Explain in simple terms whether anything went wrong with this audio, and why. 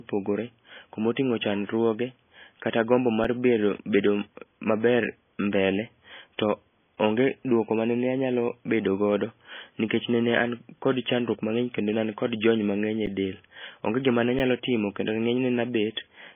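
MP3 compression runs through the whole speech clip. The sound is likely squeezed into a very small MP3, so nothing above 3.5 kHz survives, leaving it dull and muffled. The encoder also drops weak detail that flickers in and out, giving a watery, swirly edge.

An underrun with held sample happens at 3.24 s, just after "chandruoge kata gombo", then at 13.06 s and 14.39 s. Each time, playback briefly ran out of data and froze on its last level for about 5 to 13 milliseconds, so a tiny slice of sound was skipped.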